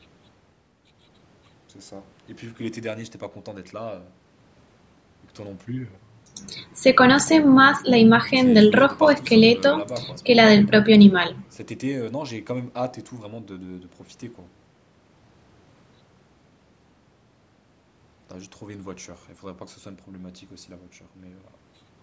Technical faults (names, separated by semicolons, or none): none